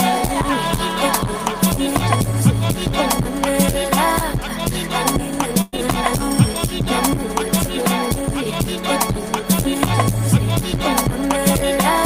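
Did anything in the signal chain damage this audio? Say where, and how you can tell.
Yes. From 5.61 to 5.74 s the sound stretches into a fading, held tail, then jumps ahead. This is a burst of packet loss on the network: the receiver padded about 110 ms and skipped 120 ms.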